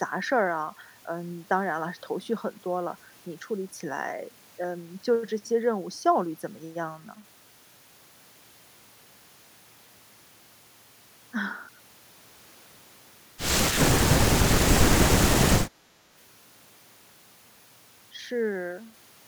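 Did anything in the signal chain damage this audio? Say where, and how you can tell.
Yes. Throughout the speech there is grainy distortion that rises and falls with the sound, about 30 dB below it, and quiet tails sputter or drop to silence. This is low bit depth without dither, likely from truncating to 8 bits during sample-format conversion. Steady hiss would stay put. This error follows the signal.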